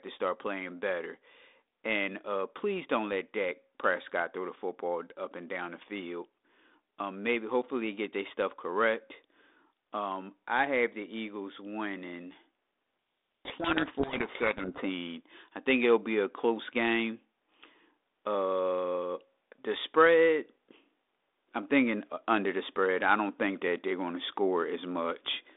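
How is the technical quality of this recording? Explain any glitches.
The recording has one clear glitch: a codec payload misread from 13.45 to 14.83 s. The speech travels over a G.726 ADPCM telephone link at 32 kbit/s, confined to roughly 250 Hz to 3.7 kHz, with light coding roughness. During that 1.38-second stretch, the receiver unpacked each G.726 code word with its bits in the wrong order. The decoder therefore turned scrambled difference values into samples, and the speech is buried under harsh, grinding distortion until the two ends agree on the packing again.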